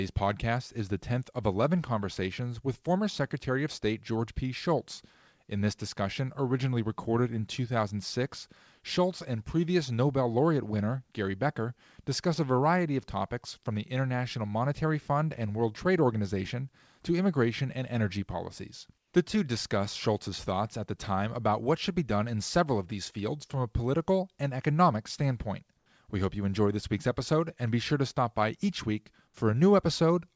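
At 18.98–19.14 s and 25.78–25.86 s, comfort noise replaces the background: a flat, featureless hiss about 4–5 dB quieter, likely from discontinuous transmission. Unlike a dropout, it never falls to silence.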